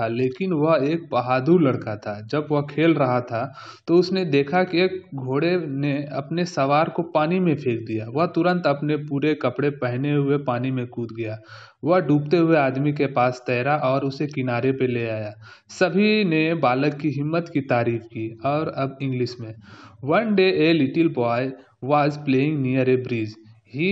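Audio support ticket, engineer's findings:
No fault found on listening; no symptom to attribute to any component, ticket can close without action.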